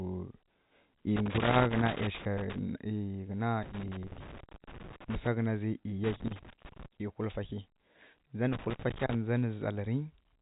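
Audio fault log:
1.16–2.58 s, 3.63–5.27 s, 6.04–6.86 s, 8.53–9.15 s: loose connector crackle. Four irregular bursts of scratching and crackle, lasting roughly 0.6 to 1.6 s each, break up the speech. A worn or dirty contact in the signal path is making and breaking as it shifts. Each break chops the audio into fragments, and any DC offset on the line turns the make-break edges into sharp pops. Between bursts, the narrow telephone band of the G.711 line comes through.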